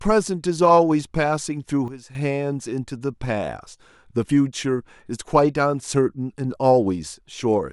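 Speech, with a sudden gain jump from 1.88 to 2.15 s: level drops by about 12 dB in a single step, likely an unramped digital gain change. Unlike a fade or compressor action, the background noise falls and recovers instantly with the sound, and there is no gradual slope.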